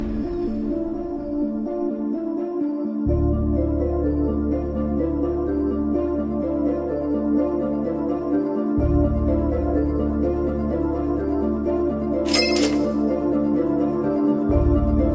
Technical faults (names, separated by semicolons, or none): none